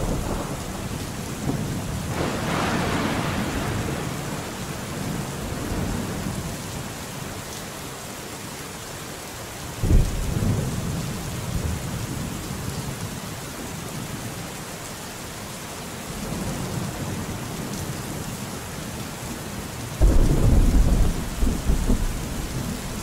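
No technical faults occur anywhere in the clip, so there are none to describe in time order.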